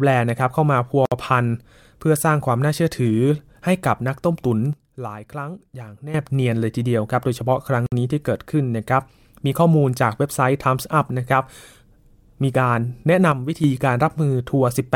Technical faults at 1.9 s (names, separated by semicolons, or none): none